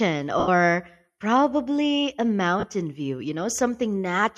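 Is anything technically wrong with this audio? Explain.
Yes. Bluetooth LE Audio frames were lost twice: from 0.39 to 0.48 s, a gap that fits about eleven 7.5 ms frames, and from 2.60 to 2.64 s, between "probably a" and "view you". The LC3 decoder covered each gap by repeating the last spectrum with randomised phase signs and fading it out. That replacement has no real detail, so the speech turns into a brief noisy smear, longer and more faded at 0.39 s.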